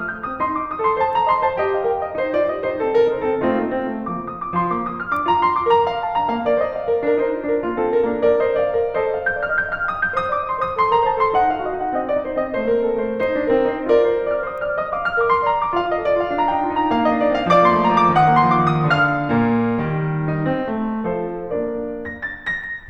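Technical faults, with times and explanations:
No technical faults can be heard anywhere in this music recording.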